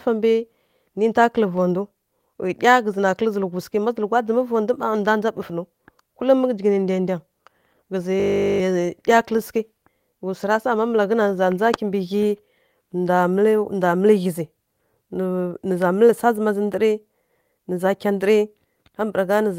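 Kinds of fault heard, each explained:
System hang loop: the playback system froze while the hardware kept replaying one 20 ms slice of speech 20 times, giving a steady 50 Hz buzz from 8.2 to 8.6 s that replaces about 0.4 s of audio. On a spectrogram this shows as harmonics spaced 50 Hz apart, and on the waveform as one identical cycle repeating.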